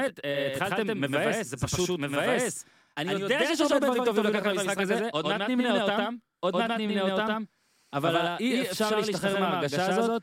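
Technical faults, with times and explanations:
Throughout: doubled audio track, speech heard twice, a dry copy trailing around 100 ms behind at similar level, likely from a slower second capture.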